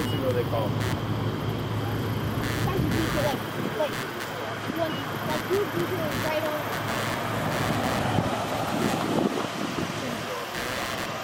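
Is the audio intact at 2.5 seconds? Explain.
No. Computer activity noise runs through the whole clip, including 2.5 s. Shifting load on the host machine's processor, graphics card or mouse disturbs the ground that the audio circuit shares, so those current swings leak into the signal. Here it comes through as a buzzy, scratching pulse train at roughly 150 pulses per second, sitting only about 10 dB below the wanted sound and rising and falling with the computer's activity rather than with the audio.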